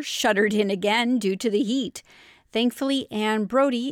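No technical faults are audible.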